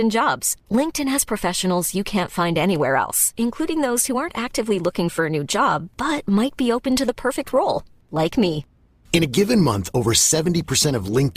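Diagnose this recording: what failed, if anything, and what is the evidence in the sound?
At 7.38 s, right after "be open to the", the speech suddenly shows more codec artefacts, with no gap, until the end. The network slowed, and playback switched to an adaptive stream at a lower bitrate, consistent with Opus dropping from 64 to 24 kbit/s.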